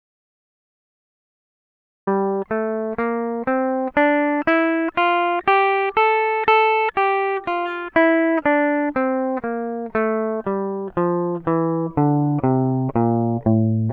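The music clip opens in an audio dropout to silence: from the very start until 2.07 s there is silence with no room tone, then the music enters mid-flow. The likely cause is a lost input while the recorder kept writing silence.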